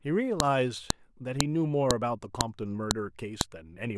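File header played as audio, at 0.40, 0.90, 1.41, 1.91, 2.41, 2.91 and 3.41 s: seven sharp, loud clicks roughly every half second, each only a couple of milliseconds long. The speech was joined from 0.5 s WAV segments, and each segment's header bytes were never stripped, so those few dozen bytes of metadata play as raw samples. The result is a brief snap at every join that cuts through the speech regardless of what it is doing.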